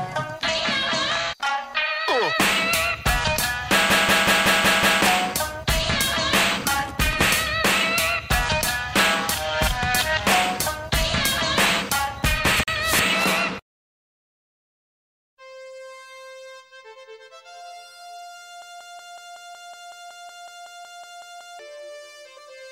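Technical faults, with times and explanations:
3.90 to 5.02 s and 18.62 to 21.59 s, system hang loop: one 186 ms slice of audio repeats exactly, 6 and then 16 times, as a machine-gun stutter at about 5.4 Hz. That fits an 8192-sample ring buffer replaying while the system froze. Roughly one second and then three seconds of audio never play. Unlike a dropout, the gap is filled with identical repeats rather than silence.
12.63 to 12.68 s, Bluetooth stall: the sound cuts to silence for 44 ms, then continues with nothing repeated. This is likely the headphone buffer running dry while interference delayed packets. Because it is a brief hole rather than a stutter, it cannot be a hang loop.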